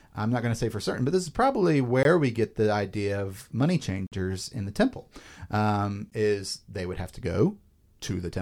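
Gaps between stream segments cut the speech at 2.03 to 2.05 s, after "but this is probably", at 4.07 to 4.12 s, before "in the temple", and at 6.10 s, before "is they would have". Timestamps on 2-second segments leave holes filled with silence. Each is a hard-edged dropout of 15 to 50 ms, with nothing lost.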